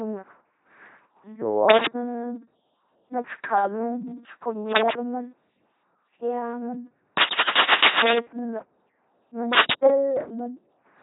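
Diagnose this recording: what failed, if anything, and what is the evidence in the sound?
The speech has a buzzing, mechanical robot quality, with nothing above 3.9 kHz and hiss or buzz where voicing flips. That points to the codec stage: heavy LPC-10 vocoder damage at 2.4 kbit/s, where each instant is rebuilt from either a pulse train or noise through a short all-pole filter.

Four bursts of dense, uneven scratching sit over the sound at 1.69–1.88 s, 4.67–4.93 s, 7.20–8.20 s and 9.53–9.78 s, roughly 5 dB above the signal, with the long third burst louder at around 10 dB. This is likely cable scratch noise in the analogue wiring, from a worn connector whose contact resistance jumps as it moves.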